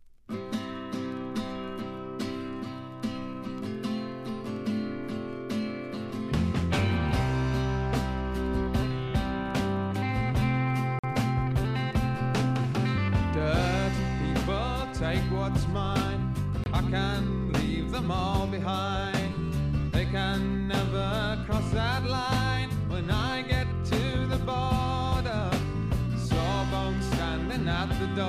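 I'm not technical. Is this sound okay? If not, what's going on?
No. The sound cuts out twice, very briefly. At 10.99 to 11.04 seconds there is a short silent gap of about 46 milliseconds. At 16.64 to 16.66 seconds there is a shorter one of about 23 milliseconds. Each gap starts and stops suddenly or with a very quick fade, and the sound picks up as if it kept playing. This is likely a Bluetooth dropout. Bits of audio reached the headphones too late and were thrown away, leaving a hole.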